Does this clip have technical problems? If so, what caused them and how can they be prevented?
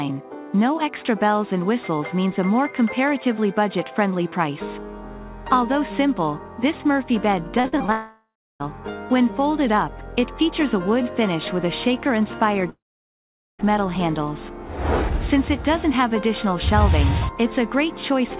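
Yes. From 7.6 to 7.9 s the sound turns choppy and robotic, with four short holes, the longest about 40 ms, patched by repeating the preceding sound; roughly 40% of that stretch is filled in. This is repeated packet loss, where packets kept arriving late or not at all and concealment stretched the last audio over each gap. A steadier network link or a larger jitter buffer would prevent it.

At 7.92 to 8.62 s and again at 12.70 to 13.61 s the sound smears into a fading buzz, then goes quiet for about 0.33 s and 0.82 s respectively before resuming with content missing. Each is likely a long network dropout, with no packets reaching the receiver until the connection recovered. A more reliable connection, such as wired rather than congested wireless, would prevent it.

The G.711 mu-law call codec at 64 kbps removes everything above 4 kHz.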